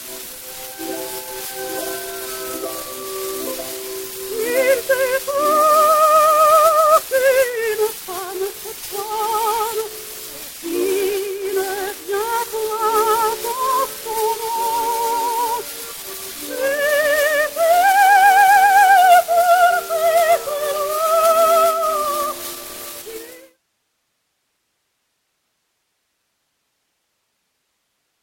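Nothing here needs attention, and the level simply eases down in a smooth fade-out that begins around 23 s and finishes by 23.6 s.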